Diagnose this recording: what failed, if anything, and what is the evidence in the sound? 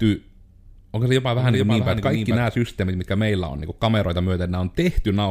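A doubled audio track shows up from 1.38 to 2.48 s: the speech gets a dry, full-band second copy trailing around 0.4 s behind, a few dB down, switching in and out abruptly. It's likely a second, slower capture path or a misaligned edit stacking two copies.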